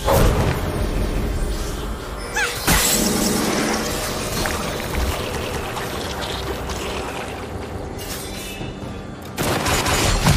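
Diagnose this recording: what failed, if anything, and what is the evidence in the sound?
A short stutter at 3.21 s and again at 7.61 s, where about 200 ms of sound plays twice before the audio moves on. These are overlapping chunks at the buffer or chunking stage: the sound was handled in 2.0 s blocks, each starting 200 ms before the previous one ended.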